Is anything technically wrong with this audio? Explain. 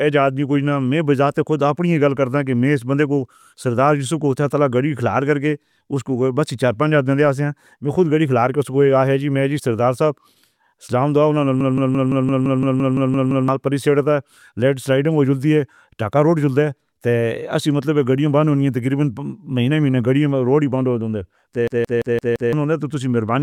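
Yes. A system hang loop occurs twice in this speech, from 11.61 to 13.48 s and from 21.68 to 22.53 s. The computer stalled while the sound hardware kept replaying its last buffer: a 170.67 ms slice, which fits an 8192-sample buffer, repeats eleven times, then five. This gives a machine-gun stutter at 5.86 Hz and drops roughly two seconds, then one second, of speech. The waveform shows identical repeated blocks, and the spectrogram shows the same pattern tiled side by side.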